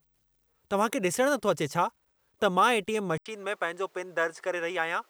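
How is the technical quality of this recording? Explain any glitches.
The recording has one clear glitch. At 3.18 s the sound drops out for about 80 ms and then comes back duller, with nothing above 9.7 kHz and a new noise floor roughly 40 dB down. The loudness stays about the same. That points to the input switched to a poorer device, likely a different microphone or headset taking over mid-take.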